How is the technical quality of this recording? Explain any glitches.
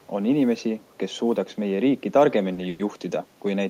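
The recording has four distinct problems, all in a short stretch of speech: faint echoes early on, then a harsh, over-bright tone and two brief hitches in the second half.

Echo leak, 0.00 to 0.07 s and 0.80 to 0.98 s: a very faint ghost of the speech trails the original by about 0.39 s, sitting roughly 40 dB below it, so it registers as a thin shadow rather than a clear repeat. The likely cause is a loudspeaker at the far end whose echo canceller missed part of what its microphone picked up, so that residue travelled back down the line as a delayed copy.

Pre-emphasis left on, from 2.16 s to the end: the sound turns suddenly thin, bright and hissy, with sibilants standing out sharply. The treble is raised by about 13 dB at 10 kHz relative to 1 kHz, a shape that fits the standard FM 75 µs boost. That boost is meant to be undone by a matching cut on playback, and here the cut was never applied, so the lifted highs remain.

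Short stall from a late packet, 2.53 to 2.59 s: one sound is held slightly too long, by about 40 ms. A packet missed its slot and the jitter buffer ran dry, so the receiver stretched the last audio until the data arrived, then resumed from the same point. Nothing is lost, but the timing shifts later by 40 ms.

Call audio freeze, 2.69 to 2.81 s: the sound hangs and fades for about 100 ms without dropping into silence, then picks up exactly where it stopped. This is likely packets delayed in transit emptying the jitter buffer, with the receiver filling the wait by extending the last sound. No speech goes missing, but a 100 ms gap is inserted and everything after it plays that much later.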